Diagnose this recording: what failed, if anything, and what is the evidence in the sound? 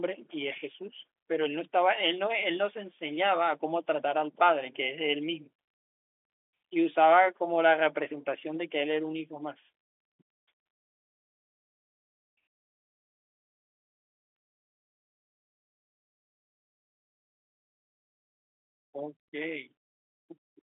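Nothing failed; the telephone-band coding is working as intended.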